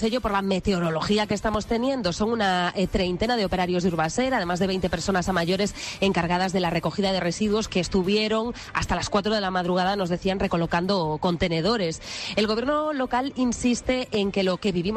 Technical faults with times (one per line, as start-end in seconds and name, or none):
1.31-1.57 loud pop
14.14-14.17 loud pop